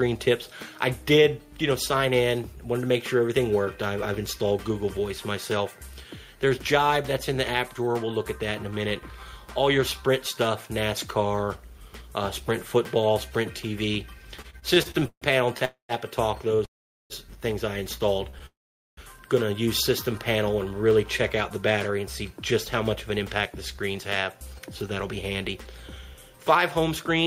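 From 14.41 to 16.62 s the audio stutters: eleven repeated stalls (stutter), the longest 142 ms, where packets arrived late and the jitter buffer kept running dry. The receiver extended the last sound each time, adding 371 ms in total, so the passage drags but loses nothing.

Three call audio freezes occur, at 15.65 to 15.92 s, 16.65 to 17.13 s and 18.46 to 19.00 s. In each, the sound is held as a fading buzz or hiss and then drops to silence, for about 120 ms, 420 ms and 450 ms respectively. Each freeze inserts a gap of 242 ms, 452 ms and 512 ms, after which the audio resumes exactly where it stopped. The likely cause is packets held up in transit, which emptied the jitter buffer.

Between 18.30 and 18.36 s there is a short stall from a late packet: one packet missed its slot, and the receiver stretched the preceding sound by 30 ms, which is heard as a brief hold with a slight buzz or dip.

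From 21.50 to 27.11 s, a jitter buffer speed-up plays the audio at 105% speed with pitch unchanged. The receiver trimmed short pitch-period pieces, about a third of a second in total, to drain the excess delay, and the sound comes across as hurried.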